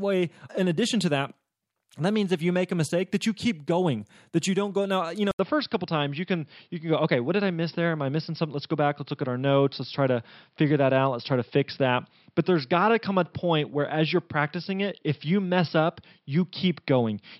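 Input switched to a poorer device, at 5.31 s and lasting to the end of the speech: after a gap of about 80 ms, the sound turns dull and boxy, with nothing above 5.5 kHz, and a faint new background noise sits well below the speech while loudness stays about the same. The likely cause is the recording input changing mid-take to a lower-quality microphone or headset profile with a narrower band and its own tone.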